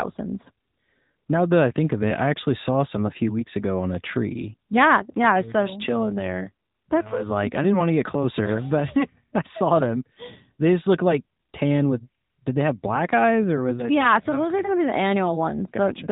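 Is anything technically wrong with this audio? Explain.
Yes. AMR narrowband mobile codec, throughout: the speech is coded by a vocal-tract model fed sparse pulses, leaving nothing above 3.8 kHz and a plainly buzzy, synthetic tone, which fits roughly 10 kbps.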